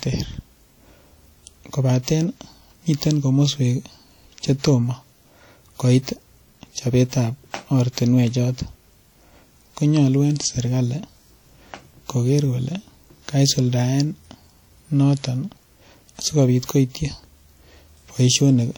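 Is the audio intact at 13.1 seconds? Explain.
No. At 13.1 seconds the speech sounds ringing and washy, with a hiss that rises and falls with the signal, as it does throughout. This is likely WMA compression: a transform codec smearing quantisation noise over tens of milliseconds, consistent with a bitrate near 48 kbps.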